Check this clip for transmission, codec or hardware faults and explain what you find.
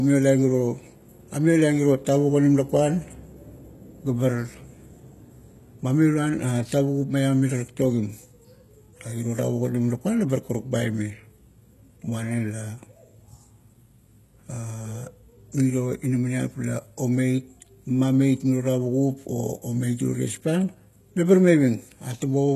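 There is a codec fault running through the whole speech clip, with plainly audible damage. It is likely HE-AAC compression at a very low bitrate, roughly 16 kbps. Only the lower band is coded properly. The treble is rebuilt by copying lower bands upward, so the s sounds come out gritty and metallic. On a spectrogram, the upper region shows repeated, smeared blocks of harmonics that fail to line up with those below, and there is no energy above 12.3 kHz.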